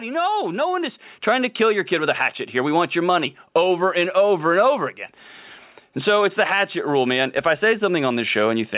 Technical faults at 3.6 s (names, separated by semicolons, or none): none